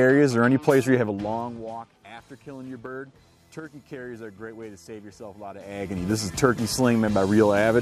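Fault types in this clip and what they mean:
No technical faults can be heard in this audio.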